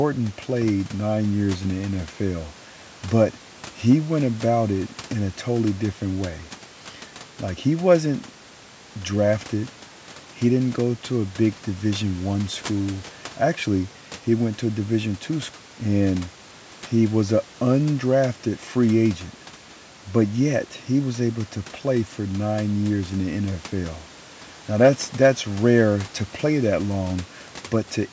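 Speech with no technical fault to report. The call microphone processing limits the sound to below 8 kHz, and the room noise sits about 25 dB under the speech.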